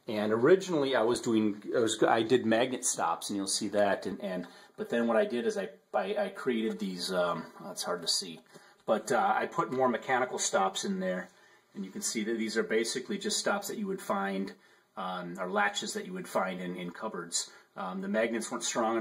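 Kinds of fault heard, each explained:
Channel delay (comb filtering): From about 4.1 s to the end the sound turns hollow and phasey, with fixed notches starting around 100 Hz and repeating evenly up the spectrum. One channel lags the other by roughly 5 ms, so summing them cancels shared content.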